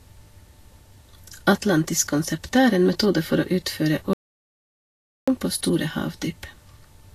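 From the start, the speech carries Vorbis compression artefacts. Nothing is present above 14.1 kHz. Below that edge, the treble sounds hissy and grainy, and consonant attacks are smeared. The damage is plainly audible. This points to a low bitrate, on the order of 36 kbps. At that rate, the encoder quantises high-frequency detail so coarsely that it turns into noise-like texture of similar energy, which roughens the tone of the speech.

At 4.13 s, just after "for å utføre", the audio drops out to silence. The gap lasts 1.14 s, until 5.28 s, where the speech resumes with "på store". The silence is complete, with no room tone underneath. The likely cause is a brief loss of the input signal while the recorder kept writing silence. Whatever was spoken in that second is missing.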